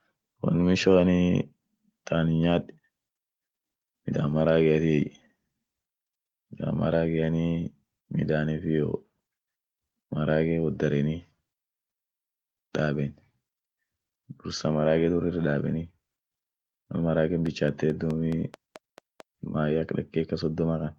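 From 17.46 s to 19.21 s a train of clicks sits over the speech: around ten sharp, near-identical ticks at a regular 4.6 per second, peaking a few decibels above the speech itself. They are spaced evenly and keep going through gaps in the speech, so they stand out as a steady ticking. The likely cause is interference from nearby equipment or a faulty connection or power supply, injecting a repeated pulse into the signal path for under two seconds.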